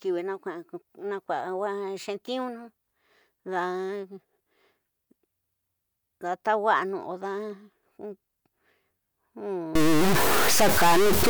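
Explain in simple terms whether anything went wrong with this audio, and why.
Stuck bit, 9.75 s to the end: the speech turns harsh and buzzy, likely because one digital bit froze, pushing about half the samples off by a sizeable fixed step.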